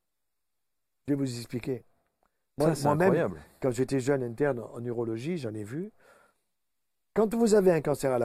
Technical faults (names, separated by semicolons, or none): none